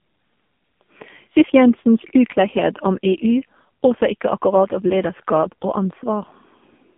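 AMR narrowband mobile codec damage runs throughout the speech. Nothing passes above 3.6 kHz, with the line band spanning roughly 150 Hz to 3.5 kHz. Heavy vocal-tract modelling makes it buzzy and synthetic, which fits a low rate near 5.9 kbps.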